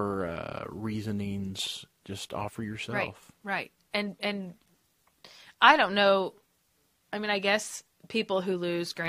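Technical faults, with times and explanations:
No technical faults can be heard anywhere in the speech signal.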